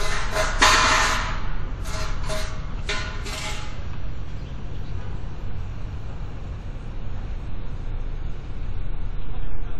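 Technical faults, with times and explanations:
Throughout, WMA compression: the audio has a plainly audible ringing, washy quality, with a hiss that swells and fades along with the signal. This is likely the result of a Windows Media Audio encode at a low bitrate, which fits roughly 48 kbps. Long transform blocks smear quantisation noise across tens of milliseconds, and weak components are dropped. On a spectrogram, content still reaches about 20 kHz, but it looks patchy, with holes and a speckled noise haze around onsets. The waveform shows pre-echo before attacks.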